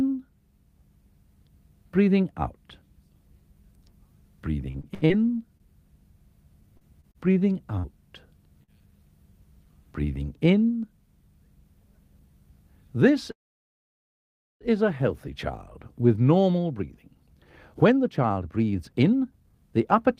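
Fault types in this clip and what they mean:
repeated packet loss (robotic sound): Choppy, robotic patches from 4.71 to 5.63 s and 6.77 to 7.86 s, where repeated lost packets were filled by extending the preceding sound.
short concealed packet loss: A brief smear at 8.63 s, where about 40 ms failed to arrive and the receiver bridged it by continuing the previous sound.
jitter buffer speed-up: Hurried sound at the same pitch, at 115% speed briefly near 10.8 s, then 122% from 16.70 to 20.08 s, as pitch-period pieces were dropped to shrink delay.
call audio freeze: The audio stalls into near silence for about 1.3 s from 13.31 s, then resumes unbroken, likely because delayed packets emptied the jitter buffer.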